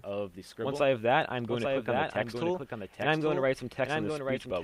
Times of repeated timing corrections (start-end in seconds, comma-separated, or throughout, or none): 0.12-4.47